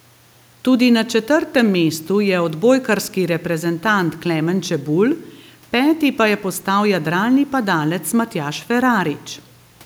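No technical faults can be heard anywhere in this recording of speech.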